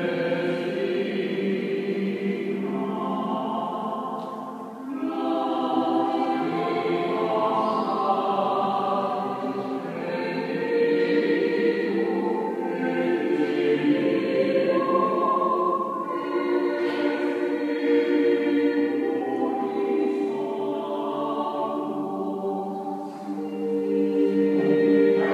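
No technical faults are audible.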